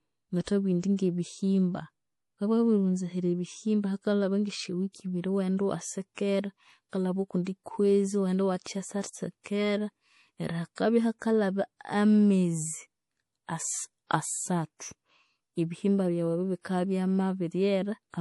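Right from the start the whole clip has that watery, swirly quality of MP3 compression, likely at a low bitrate, something like 48 kbps. Nothing survives above 11.5 kHz, so s sounds come out dull and chirpy, with weak detail flickering in and out.

Around 0.44 to 0.47 s there's pre-echo: a hiss creeps in for about 37 ms ahead of a sharp attack, because the codec smeared its noise across the whole block. It happens again at 8.62 to 8.66 s, spreading about 41 ms, and the attack sounds blunted.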